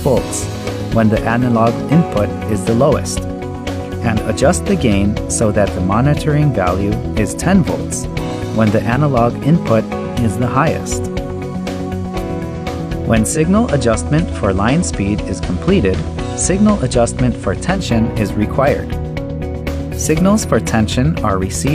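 From 13.24 to 17.87 s, digital radio blending to analogue cross-fades to FM over 185 ms, adding faint hiss and dropping level about 1 dB.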